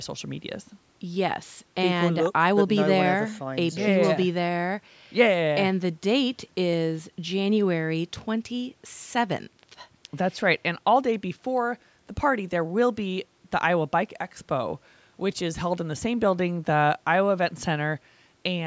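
Speech through call microphone processing, with the lowest bass filtered out and nothing above 8 kHz, both normal for that path, and no technical fault is present.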